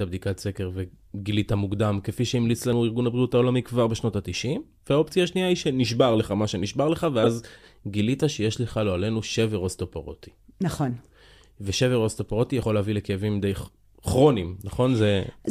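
The clip is speech with two kinds of fault. At 2.73 s and again at 12.63 s the sound skips. About 50 ms is gone each time, and the two sides are butted together with no silence between them. This is audio missing between chunks. The likely cause is a recorder or processor working in 5-second chunks that drops a short piece while it closes one chunk and opens the next. The join is abrupt, so the flow jumps forward. From 7.23 to 7.27 s there is a brief burst of wrong sound, about 40 ms long. This is a corrupt frame decoded. Damaged bits in one compressed frame were played anyway. Misread gains and codes put energy at the wrong frequencies for that frame. It is heard as a short blip or chirp over the speech.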